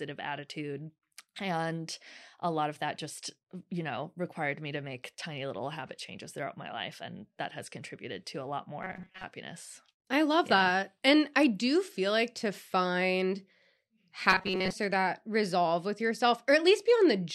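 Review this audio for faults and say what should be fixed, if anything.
A rigid, metallic buzz at 188 Hz runs through the speech from 8.83 to 9.24 s and again from 14.30 to 14.73 s: robotic sound from repeated short buffers, likely a roughly 5.3 ms block looped while most incoming audio is skipped. Keep the audio buffer fed steadily.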